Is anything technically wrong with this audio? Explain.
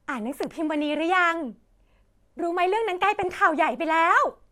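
Yes, there are two faults in this speech clip.

From 0.43 to 0.45 s there is a loud pop: a single sharp crack that jumps to roughly 10 dB above the speech, which carries on beneath it. The cause is likely a sudden voltage step or spike, from a plug, a switch, a static discharge or a driver glitch, entering the signal path, where the following circuitry shapes it into that brief percussive burst.

From 3.04 to 3.32 s comes DAB burbling, short noisy blips laid over the speech for roughly a quarter of a second. Weak digital radio reception let bit errors slip past the error correction into the compressed audio data, at a rate somewhere around a tenth of a percent or a little more. Corrupted samples then put short blips of noise into individual frequency sub-bands, and corrupted scale factors make sub-bands lurch in level for up to a frame, which fits around a dozen frames being hit.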